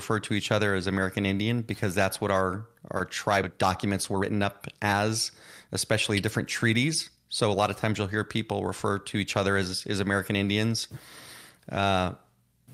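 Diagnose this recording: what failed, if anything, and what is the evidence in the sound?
Speech jumps forward abruptly at 3.43 to 3.45 s, joined with no gap; about a second of audio was discarded, a network or jitter-buffer skip ahead.

Speech then sounds hurried at unchanged pitch, about 15% faster from 3.49 to 5.09 s, then 6% faster at 5.67 to 8.03 s and 8.53 to 9.48 s. This is a jitter buffer speed-up, trimming pitch periods to drain excess delay.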